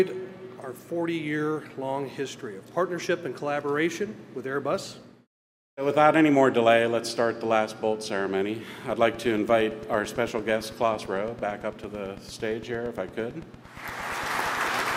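The audio carries a train of clicks from 8.9 s to 14.92 s. Around fifty near-identical ticks arrive at a steady 8.8 per second, roughly as loud as the sound itself and audible in pauses too. Electrical interference or a struggling interface is the likely cause.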